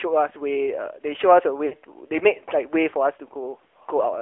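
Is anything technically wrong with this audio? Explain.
Yes, two things. Throughout, it has the sound of the AMR narrowband mobile codec: squeezed into roughly 300 Hz to 3.4 kHz, with a plainly buzzy, synthetic edge that fits the 10.2 kbps mode.

From 1.66 to 1.74 s there are lost AMR speech frames. About 60 ms drops out, which fits three 20 ms frames. The decoder fills the gap by repeating its last settings while fading them, so the speech smears briefly and dips.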